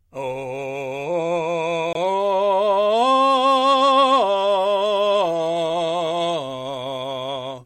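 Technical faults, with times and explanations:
1.93–1.97 s, corrupt frame muted: the music drops abruptly into a 40 ms silent hole, which fits two lost compressed frames. Damaged bits made the decoder reject them. The player filled their place with silence. Timing stays intact, so the music resumes on beat.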